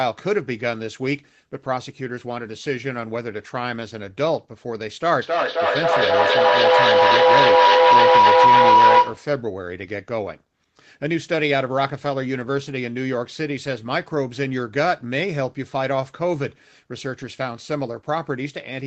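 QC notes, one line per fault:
5.22–9.4 s, feedback howl: two devices in one room loop the sound, which swells to a tone around 1 kHz, with repeats roughly every 0.3 s and peaking about 9 dB over the speech.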